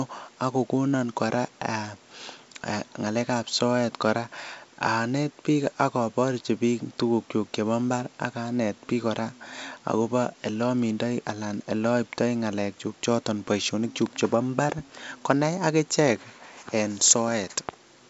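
No technical faults can be heard in this speech, which comes across as G.722 wideband telephone coding at 64 kbit/s, with the coding leaving at most a faint trace on the sound.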